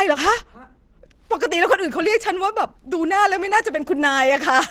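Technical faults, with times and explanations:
Throughout, Opus compression. The speech sounds hoarse and somewhat muffled, with a rough, grainy edge. The damage is plainly audible. Its likely cause is the encoder's hybrid speech mode at a low rate, which fits about 16 kbps. Nothing sounds above 20.2 kHz.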